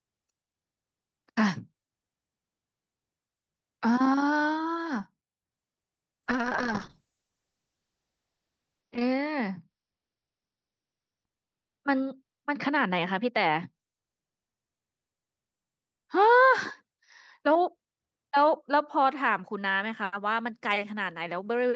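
From 6.25 to 16.89 s the speech turns rough and muffled above 6 kHz. This is a call bitrate drop, consistent with Opus falling toward 6 kbps.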